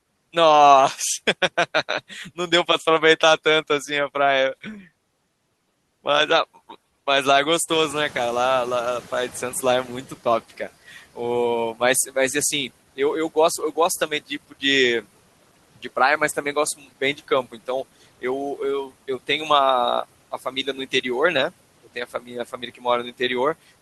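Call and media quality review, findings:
Noise suppressor catching up, 7.68 to 10.43 s. Room noise steps up by about 12 dB around 7.5 s, and the suppressor's noise estimate lags, taking 2.75 s to adapt. Symptom: the louder background passes through with little reduction at first, then sinks by about 11 dB as the estimate settles. Component: noise suppression stage, slow noise-floor tracking.

Speech cut by the noise suppressor, six events: 10.1 to 11.18 s, 13.35 to 14.62 s, 15.83 to 17.69 s, 18.58 to 19.29 s, 20.32 to 21.05 s, 21.84 to 23.21 s. Component: same suppressor, misclassifying low-level speech as noise after the floor rise. Symptom: soft consonants, endings and quiet stretches swallowed, gain drops about 11 to 16 dB, deepest in the 21.84 to 23.21 s event. Affected portions range from a tenth to half a second per event.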